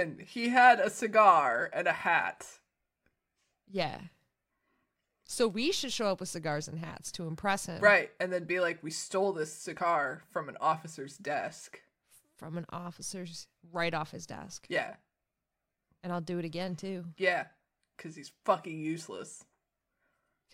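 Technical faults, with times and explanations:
No technical faults, with times or otherwise, can be heard in this speech.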